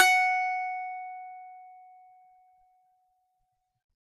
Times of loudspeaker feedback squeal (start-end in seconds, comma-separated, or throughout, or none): none